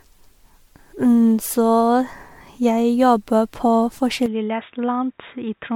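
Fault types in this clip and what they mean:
Generation loss: swirly, smeared and hollow with blurred attacks, likely from about four passes through MP3 at 96 kbit/s, each pass stacking fresh quantisation damage.
Input switched to a poorer device: at 4.26 s the sound goes dull, cut off above 3.8 kHz and about 5 dB quieter with no gap, likely a switch to a worse input.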